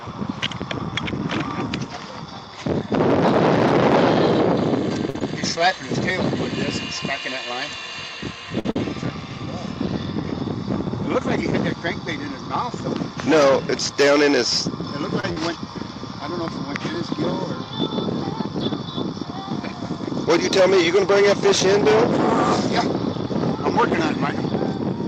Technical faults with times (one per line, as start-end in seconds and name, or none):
5.09-5.16 short stall from a late packet
5.18-5.22 short concealed packet loss
8.59-8.66 short stall from a late packet
8.71-8.76 burst of packet loss
15.20-15.24 short stall from a late packet
15.32-15.37 short concealed packet loss
21.65-23.80 jitter buffer speed-up